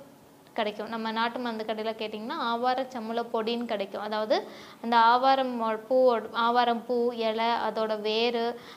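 Nothing goes wrong anywhere along the way here, so there's no fault to point to at any moment in the clip.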